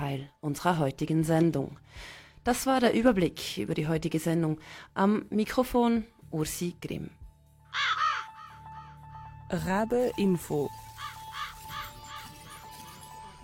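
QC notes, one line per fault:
Nothing in this one caught my ear as a problem, so there's nothing to log here.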